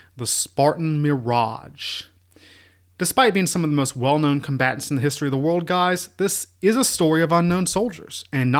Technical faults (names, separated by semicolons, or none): none